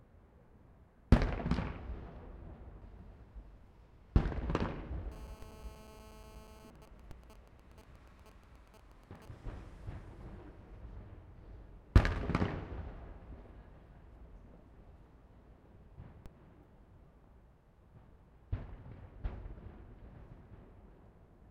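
A recording of everyday sounds picks up GSM phone buzz from 5.12 to 6.70 s: a steady, raspy 217 Hz tone with dense harmonics about 18 dB below the sound, from a nearby 2G phone's call-mode bursts being rectified. From 6.76 to 9.28 s this turns into GSM signalling bursts, even ticks with a longer 217 Hz buzz twice a second, roughly 20 dB down. That stop-start rhythm separates it from the continuous call buzz, and fits the phone staying in the call while its user is silent. DC steps land at 5.42, 7.11 and 16.26 s, each a sudden baseline jump of about -36 to -38 dBFS that a 20 Hz high-pass lets die away. They are heard as single low thumps with no 217 Hz rasp, unlike the GSM ticks.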